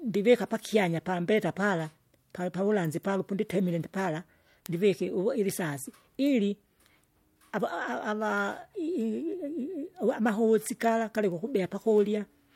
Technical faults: word clock ticks

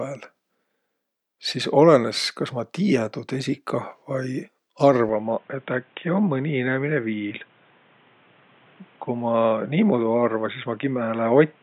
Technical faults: input switched to a poorer device

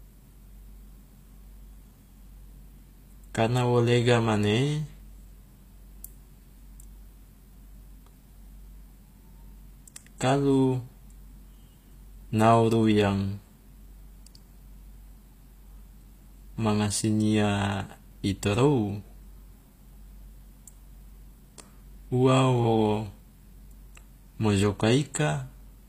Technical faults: HE-AAC compression; pre-echo

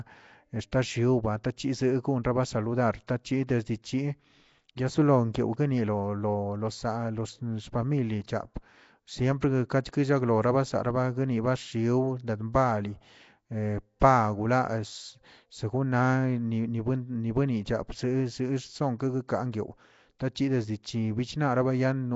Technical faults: Nellymoser compression; pre-echo

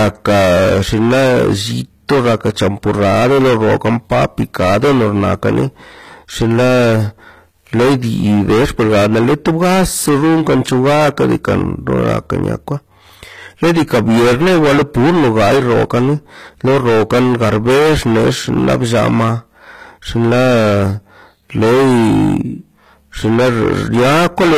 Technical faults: hard clipping; HE-AAC compression

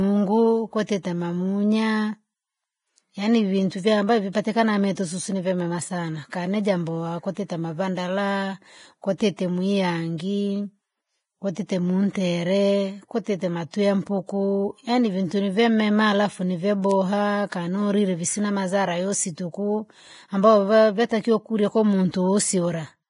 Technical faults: Vorbis compression; pre-echo

